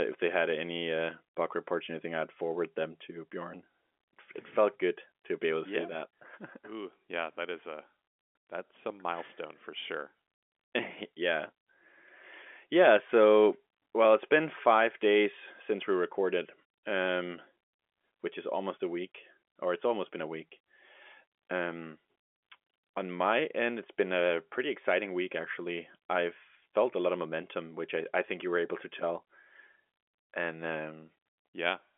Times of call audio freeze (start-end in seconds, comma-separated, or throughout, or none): none